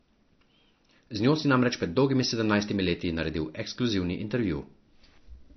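MP3 compression runs through the whole clip, likely from encoding at a bitrate low enough to suggest about 32 kbps. Short of bits, the encoder has removed everything above 6 kHz and dropped weak frequency lines, leaving the speech dull, watery and swirling, with smeared consonant attacks.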